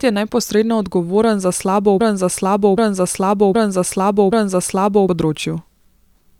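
Right after "neposredno odgovoren za slabo", at 2.00 s, a broken-record loop kicks in: a 0.77 s chunk repeats four times until 5.09 s, likely a stalled stream.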